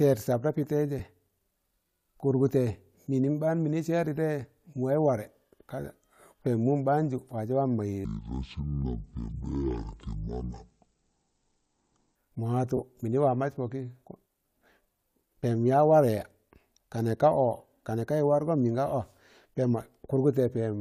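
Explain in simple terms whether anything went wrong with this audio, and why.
Two kinds of fault can be heard. The first is lost LE Audio frames: at 0.99 s and again around 12.77 to 12.80 s, brief gaps become a short noisy smear rather than a hard click, because the receiver patched the missing Bluetooth audio with reshuffled copies of what came just before.

The second is a section at the wrong speed, from 8.05 to 12.16 s. The speech plays at just over half speed, so it sounds slow and deep, dropping nearly an octave. The pitch and pace fall together, which sets it apart from a pitch shift alone. The likely cause is that this stretch was played back against the wrong clock.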